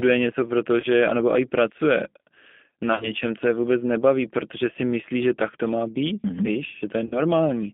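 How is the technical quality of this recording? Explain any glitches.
The recording is a speech clip with clearly degraded technical quality: narrowband, codec-coloured sound throughout, plus three short dropouts.

G.729 codec damage runs through the whole clip. The audio is confined to roughly 200 Hz to 3.5 kHz, which fits an 8 kbit/s G.729A channel. This codec resynthesises speech from a vocal tract filter, a pitch predictor and a few pulses per frame, so the sound is plainly rough and synthetic, with no content above the telephone band.

VoIP packet loss concealed by the speech codec occurs at 0.80–0.86 s, 2.93–3.10 s and 7.06–7.21 s. At these points the decoder lost incoming audio, about 30 ms, 70 ms and 50 ms respectively. It filled the gaps by extrapolating from its last pitch and filter while lowering the gain. The middle event is scattered, with about 70 ms missing over a 100 ms stretch. 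In each case the sound smears into a fading buzzy tone or coloured noise, and because each frame builds on the previous one, it stays weak briefly afterwards.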